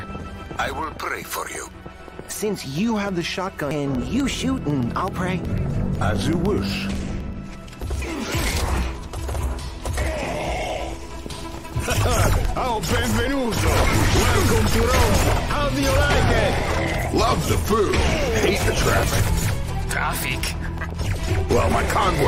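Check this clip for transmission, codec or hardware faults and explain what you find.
There's one fault here, a single glitch at about 3.71 s. It's damaged data in the compressed stream: a stretch of the encoded bytes got lost or corrupted, so the decoder couldn't make sense of the frame there. It loses its place and has to hunt for the next valid frame header before it can carry on. What you hear is a brief chirp or blip at that moment.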